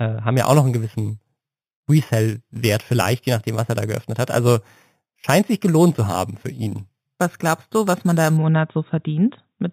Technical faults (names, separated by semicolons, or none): imaging from sample-and-hold upsampling